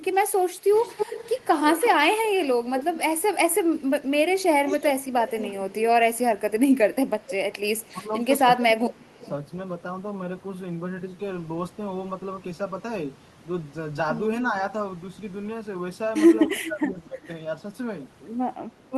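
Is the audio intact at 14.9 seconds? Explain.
Yes, the speech plays through 14.9 seconds without any audible fault at that moment.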